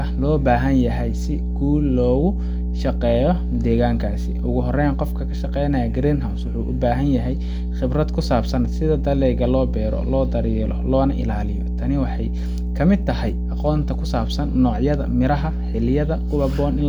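Mains hum runs through the whole speech clip, a steady 60 Hz tone sitting roughly level with the voice, picked up from the power line through a ground loop or nearby transformer. Its fixed pitch and unchanging loudness set it apart from irregular, broadband low-frequency rumble.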